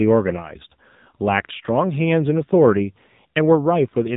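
Speech passed through an AMR narrowband mobile codec throughout: nothing above 3.8 kHz, with a plainly buzzy, synthetic vocal-tract rendering, consistent with a low mode near 7.4 kbps. A plain filter would leave the voice natural.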